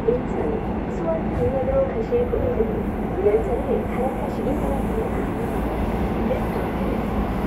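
Nothing in these sounds points to a technical fault anywhere in the recording.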